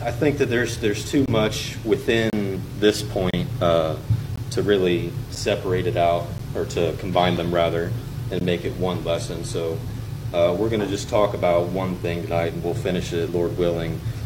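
The audio has gaps between stream segments: hard-edged silent holes at 1.26–1.28, 2.30–2.33, 3.31–3.34, 4.36–4.38, 5.35, 6.38, 7.37 and 8.40 s, one per 1-second segment, where mismatched timestamps leave short holes filled with silence.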